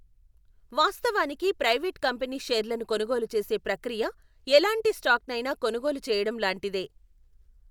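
No technical faults occur at any point in the speech recording.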